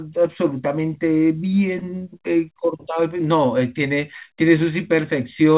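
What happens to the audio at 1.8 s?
A short stall from a late packet occurs at 1.79–1.85 s: the receiver stretches the last sound for about 26 ms, shown as a smeared, repeated stretch in the spectrogram with a slight buzz or dip.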